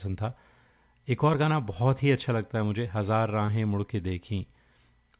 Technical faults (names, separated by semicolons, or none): short concealed packet loss